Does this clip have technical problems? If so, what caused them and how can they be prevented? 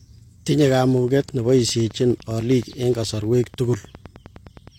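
Yes. Something, likely interference from nearby equipment or a faulty connection or power supply, was injecting a pulse into the signal path. This produced a train of clicks from 0.98 to 4.69 s: about forty evenly spaced ticks at 9.7 per second, roughly as loud as the speech and heard in the pauses as well. To prevent it, secure cables and connectors, check the power supply, and keep the recording chain away from other electrical equipment.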